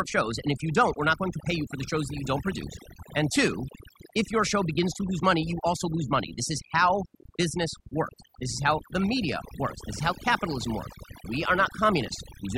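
Throughout the speech, overdone noise removal leaves near-silent gaps with twinkling specks; unlike a noise gate, individual frequency bands vanish rather than everything.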